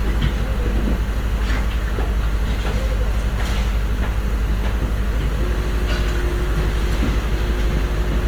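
Opus compression, throughout: the sound turns grainy and rough, with tones smeared into noise, likely from low-bitrate music-mode encoding around 24 kbps filling bands with noise.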